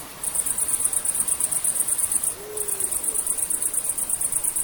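No faults turn up anywhere in the clip.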